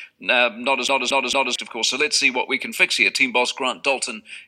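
From 0.88 to 1.56 s the audio sticks like a CD stuck on one turn: the same 0.23 s slice plays three times, each with a brief mute at the jump. That short, even stutter with a mute, unlike a seamless buffer loop, marks a laser skipping back one track.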